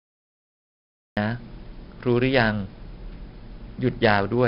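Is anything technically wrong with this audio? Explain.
Yes. The speech carries heavy 4-bit ADPCM compression throughout. Each sample is coded as a coarse step from a prediction, so gritty hiss rides on loud syllables, attacks distort, and nothing sounds above 5.3 kHz. Unlike steady background noise, the hiss follows the speech level and fades in pauses.

The clip also has a cut-off start. Digital silence runs until 1.17 s, then the speech begins abruptly mid-sound, without the gradual rise a fade-in would give.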